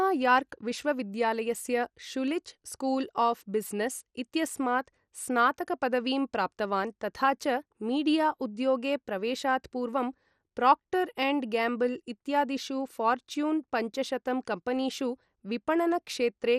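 Speech runs through the whole clip with plainly audible MP2 compression damage, likely from MPEG Layer II coding at a starved bitrate, which fits something around 64 kbps. Nothing is present above 15.1 kHz, and the remaining upper sub-bands flicker in and out while coarse quantisation leaves a gurgling, granular edge on the speech. A simple low-pass filter would dull the top end without that grain or flicker, and the flat, band-wise grittiness sets it apart from MP3's smearing.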